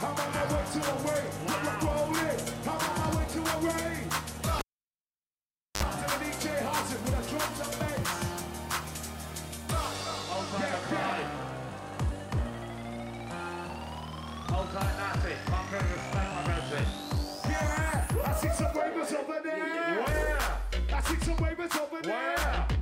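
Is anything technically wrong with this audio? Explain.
Yes. A cable pulled and plugged in interrupts the audio from 4.59 to 5.83 s. Pulling a live connector breaks the signal path with a sudden step, heard as a pop, and the sound then drops to near silence for about 1.19 s. While only the plug tip makes contact, an ungrounded path picks up 50 Hz mains buzz for about 60 ms. Reseating gives a second pop as the audio returns. On a waveform, sharp spikes frame a flat gap. A spectrogram shows vertical broadband lines at each pop and a thin horizontal band at 50 Hz during the buzz.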